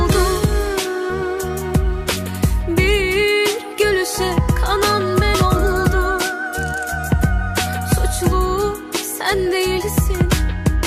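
A run of compressed frames was never played, whether missing from the file or rejected by the decoder as damaged. At 1.09 to 1.12 s the audio jumps forward by around 70 ms, which fits about three 20 ms frames.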